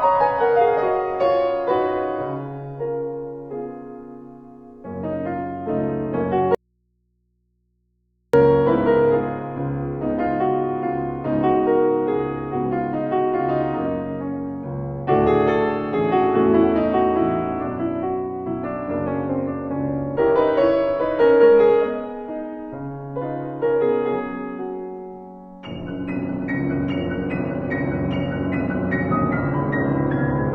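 The audio has a dropout to a faint residue from 6.55 to 8.34 s. For about 1.8 s the sound cuts out abruptly, leaving only mains hum roughly 50 dB below the signal. The likely cause is a lost input while the downstream path stayed live.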